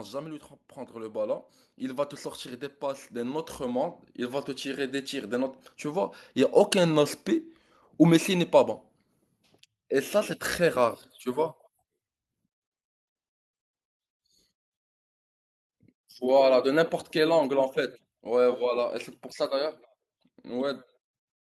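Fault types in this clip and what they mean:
automatic gain rising: The automatic gain control judged the incoming speech too quiet and raised its gain step by step, twice in quick succession. The voice and the background noise swell together rather than the voice alone growing louder. The first rise, from 0.73 to 2.25 s, is about 5 dB. The second, from 2.79 to 5.47 s, is a slower climb of about 8 dB, so the room tone creeps up along with the speech.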